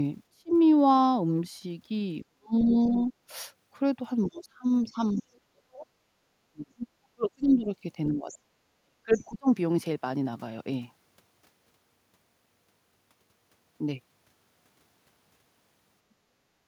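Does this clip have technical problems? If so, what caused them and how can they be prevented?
Yes. Speech suppressed in double talk occurs from 0.33 to 0.51 s, 2.21 to 3.12 s and 4.29 to 9.48 s. The voice dips by roughly 25 dB in the first stretch and by as much as roughly 40 dB in the later two. Across the long 4.29 to 9.48 s stretch, about three seconds are affected in pieces. The likely cause is both ends talking at once: the echo canceller could not tell the local talker from loudspeaker echo, so it attenuated everything. Preventing this takes an echo canceller with better double-talk detection, or a headset that removes the echo path entirely.

The other side's voice leaking through appears as a second, fainter voice at 2.69 to 3.04 s, 5.11 to 5.21 s, 6.79 to 6.87 s and 8.31 to 9.34 s. It sits roughly 15 to 30 dB below the talker, loudest near 6.8 s. It likely comes from far-end audio played on the device's loudspeaker and picked up by the microphone, with the canceller leaving residue while it was already struggling with double talk. 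Lowering the loudspeaker volume, using headphones, or letting the canceller converge before the conversation starts prevents this.

Background gated by the echo canceller occurs at 16.62 to 16.66 s, where the room sound drops by about 5 dB for 40 ms and then returns. The canceller clamped the microphone down while the loudspeaker was active, briefly taking the ambience with it. Gentler residual-echo suppression or comfort-noise insertion keeps the background steady through these moments.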